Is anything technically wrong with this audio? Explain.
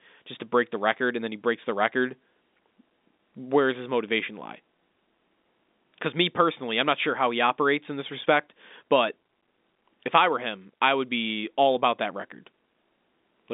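No, nothing's wrong here: it's just ordinary G.711 telephone coding at work, so the sound sits inside the usual phone band of roughly 200 Hz to 3.7 kHz with nothing above about 3.8 kHz, exactly as a normal phone line would deliver it.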